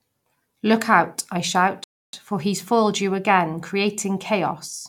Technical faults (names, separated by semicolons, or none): rebuffering stall